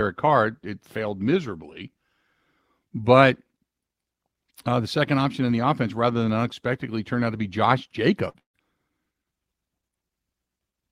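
Speech with two bursts of packet loss close together, at 8.29 to 8.37 s and 8.39 to 8.56 s. Each gap is filled with a held, fading continuation, and the second falls to about 110 ms of silence before the speech resumes further on. That fill and the skip mark them apart from a plain dropout.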